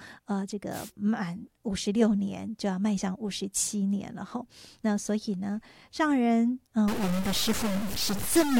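At 0.71 s there's a wireless microphone noise hit lasting until about 0.91 s: a quick swish of static as the analogue FM radio link fades, with reflections cancelling the signal so the receiver's own noise jumps up and briefly smothers the speech.

From 6.88 s to the end of the clip, the audio turns harsh and buzzy, and the gaps between speech fill with a gritty noise floor sitting around -30 dBFS. The likely cause is a stuck bit, one data bit held fixed so roughly half the samples land off by a step of that size.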